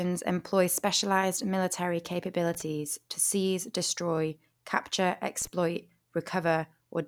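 A short, irregular burst of scratchy crackle cuts into the speech from 2.54 to 2.62 s, right after "employ specialized military" and before "to seize destroy capture", and a second, briefer burst follows from 5.42 to 5.47 s, just after "to seize destroy capture". This is loose connector crackle: a worn or dirty contact rapidly makes and breaks as it shifts, chopping the signal into fragments across those few tens of milliseconds.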